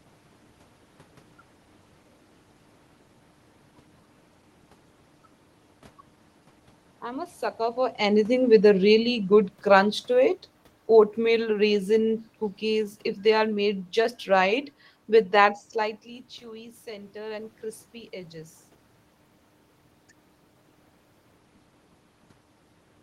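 From 8.39 to 10.53 s the speech and the room noise behind it sink together by about 5 dB, shortly after the talker moves near 7.5 s. This is automatic gain falling: the gain control heard a louder input and gradually turned itself down.

From 16.4 to 18.62 s voice and background swell together by about 3 dB. The talker had backed off around 15.5 s, dropping the input by about 14 dB, so the automatic gain rising here is the control slowly raising gain to compensate.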